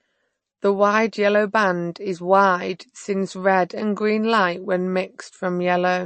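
Speech, carrying plainly audible MP3 compression throughout, likely from encoding at a low bitrate around 34 kbps. Sibilants sound watery and swirly. A spectrogram shows a hard ceiling at 8.3 kHz, with weak frequency bands flickering on and off between frames.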